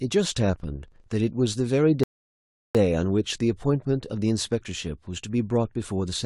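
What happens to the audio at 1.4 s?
At 1.4 s the speech is still inside a filter restarted on every block fault, running from 0.0 to 1.65 s. The filter loses its state each block and restarts from silence, leaving a 25 Hz buzz that tracks the level. A waveform shows evenly spaced spikes; a spectrogram shows vertical lines every 40 ms.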